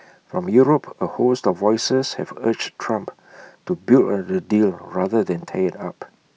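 Speech recording with nothing technically wrong to report at any point.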